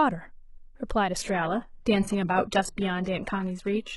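At 1.16 s the speech suddenly loses quality with no gap, and stays degraded to the end. This is an adaptive stream at a lower bitrate. The connection slowed, so the player switched versions. Treble turns thin and synthetic, with swirly codec artefacts. That fits a drop to roughly 12 kbit/s HE-AAC.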